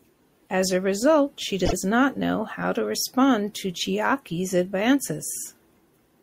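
A short run of compressed frames was delivered twice, a 48 ms block that fits a couple of frames, so the decoder replays it. These repeated frames sound as a quick stutter in the speech from 1.65 to 1.73 s, adding 48 ms to the audio.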